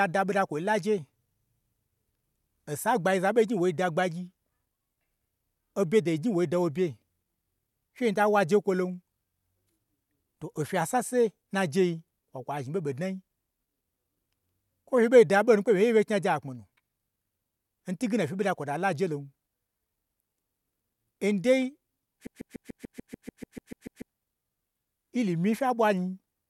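The playback or streaming chain likely stalled at 22.27 s and kept resending the last fragment it held, producing a broken-record loop that lasts until 24.10 s. A slice of speech about 0.15 s long repeats exactly, back to back, 13 times, giving a rapid mechanical stutter at roughly 7 repeats per second. Whatever should have been heard during those 1.8 seconds is gone.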